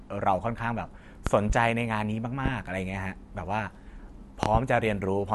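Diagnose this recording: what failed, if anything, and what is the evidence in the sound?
Loud pops cut across the speech. A double pop sits at 1.27–1.54 s, a single at 2.46–2.50 s, and another double at 4.43–4.59 s. They peak up to roughly 20 dB above the speech, which continues underneath. Likely cause: voltage steps entering the analogue wiring.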